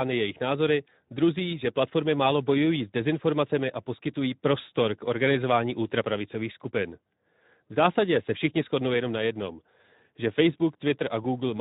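From start to finish, the speech carries Speex codec damage that is plainly audible. The CELP coder has too few bits to model the excitation, so the voice sounds noisy and hoarse, with a grainy roughness that points to a rate around 11 kbps.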